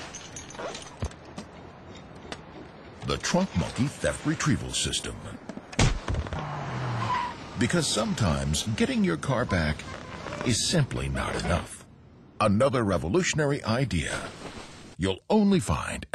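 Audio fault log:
No faults can be heard anywhere in this clip.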